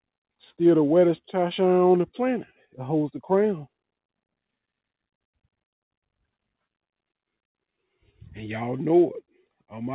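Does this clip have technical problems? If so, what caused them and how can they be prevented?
No, nothing here counts as a technical problem: the audio is simply band-limited to about 4 kHz, as expected from a G.711 mu-law call path at 64 kbps, and the call microphone processing trims the lowest bass.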